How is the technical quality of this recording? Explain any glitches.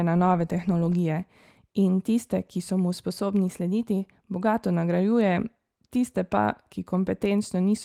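There are no glitches to explain in this speech recording. Opus voice compression can be heard only as light coding traces that keep the full band, which fits a hybrid mode at around 24 kbps.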